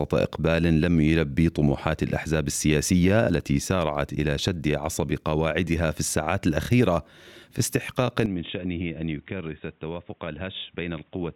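At 8.26 s the sound abruptly turns dull and boxy with no gap, drops about 10 dB in level, loses everything above 3.8 kHz, and gains a faint new background noise. The likely cause is the input switched to a poorer device, such as a headset's narrowband call profile.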